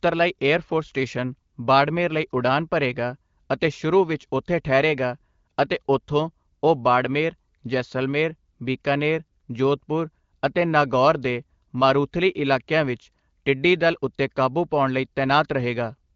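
No technical faults are audible.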